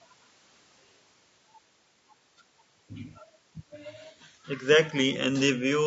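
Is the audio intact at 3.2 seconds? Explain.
No. At 3.2 seconds the speech sounds rough and grainy, as it does across the whole clip. The likely cause is low-delay AAC compression. Its short frames resolve pitch harmonics poorly, leaving noise between them, which fits a low bitrate near 32 kbps.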